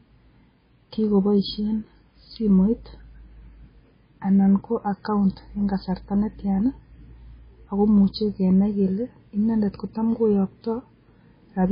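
Throughout the speech, the sound is watery and swirly, with smeared consonant attacks and nothing at all above 5 kHz. This likely comes from heavy MP3 compression, which fits a very low bitrate around 16 kbps: starved of bits, the encoder cut the treble and let weak frequency lines flicker between frames.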